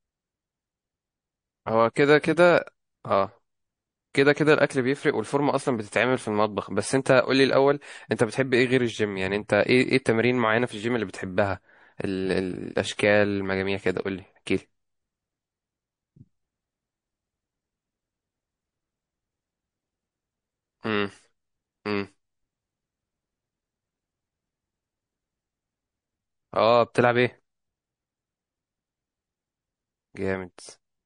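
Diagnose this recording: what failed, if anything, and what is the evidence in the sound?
The codec stage failed. Throughout, the speech has plainly audible MP3 compression damage: a watery, swirly texture and metallic chirps on s sounds. The likely cause is MP3 encoding at a low bitrate, in the region of 40 kbps.

Pre-echo, also from the codec, precedes attacks at 1.93 to 1.96 s, 8.16 to 8.19 s and 12.97 to 12.99 s. Each is a short hiss, about 18, 11 and 14 dB above the quiet before it. The hiss lasts roughly 25 ms within a 52 ms block. That fits an encoder that never switched to short blocks.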